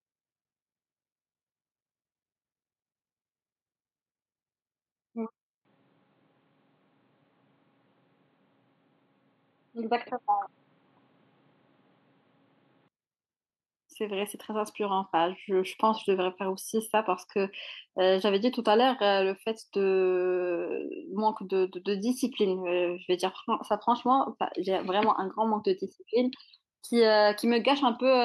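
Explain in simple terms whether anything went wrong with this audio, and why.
The recording system's automatic level control misjudged the input as too quiet and slowly turned itself up, a fault called automatic gain rising. From about 13.96 s to 23.41 s, the speech gradually gets louder. The background noise rises right along with it, because the control boosts everything it receives, not just the voice. The increase is gentle and spread over several seconds, so it sounds like a slow swell in loudness.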